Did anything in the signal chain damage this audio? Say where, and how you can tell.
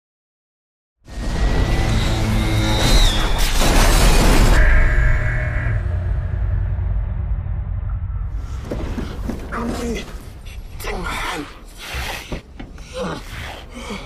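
No, nothing in the signal chain damaged this audio; the smooth fade-in from roughly 1 s to 1.9 s is an ordinary editing choice.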